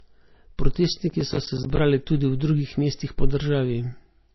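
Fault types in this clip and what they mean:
low-bitrate audio saved at a high bitrate: The speech sounds dull and smeared throughout, with nothing above 5.8 kHz and a watery edge. This is likely a very low-bitrate MP3, around 24 kbit/s, later re-saved as a high-bitrate MP3 that cannot restore the lost detail.
processor overload crackle: From 1.10 to 1.79 s a gritty, tearing crackle rides on the speech, built from many tiny dropouts to silence. The processor missed a run of buffer deadlines, about fifteen across that stretch, with gaps that fit buffers of roughly 10 ms.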